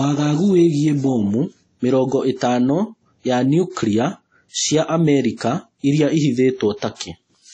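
Throughout, the speech has a ringing, washy quality with hiss that breathes with the signal and nothing above 10 kHz, likely from WMA compression at a low bitrate near 32 kbps. From 6.95 to 7.00 s, pre-echo: quantisation noise spreads about 50 ms ahead of a sharp attack, leaving a brief hiss and a softened onset.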